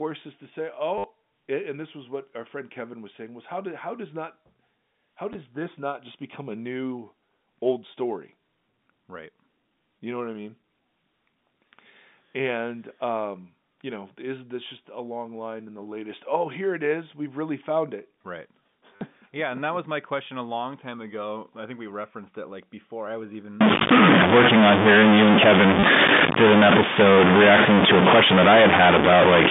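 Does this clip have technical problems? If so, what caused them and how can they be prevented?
Yes. Packet loss with the last packet repeated causes brief robotic stutters at 0.98–1.04 s, 5.33–5.35 s, 18.96–19.01 s and 25.8–25.83 s, lasting 20 to 60 ms. The receiver replayed stale audio, which fits 10 ms packets. Unlike a dropout, the gap is filled with a repeat, not silence. Adaptive jitter buffering and concealment that interpolates rather than repeats would prevent it.

From 23.61 s to the end, distortion and noise in the pauses are likely caused by a stuck bit. Unlike clipping, it also affects quiet passages. Checking the converter and data lines for faulty connections would prevent it.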